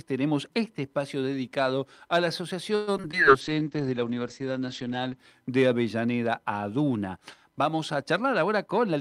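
The audio has two network faults close together. From 2.75 to 3.15 s there is repeated packet loss, giving a robotic sound. Four gaps fall in under half a second, the longest about 119 ms. Most are patched by stretching the last bit of sound, so about 39% of the span is concealed. Around 60 ms is simply missing. The result is choppy, with pieces missing. Then a call bitrate drop runs from 3.41 to 5.24 s. The sound turns rough and muffled. The top end falls from 20 kHz to about 8 kHz. This points to the encoder being pushed from around 64 kbps down to about 11 kbps. It stays at its worst for roughly 1.7 s before recovering.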